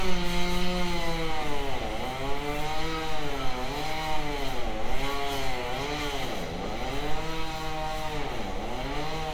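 No technical faults are audible.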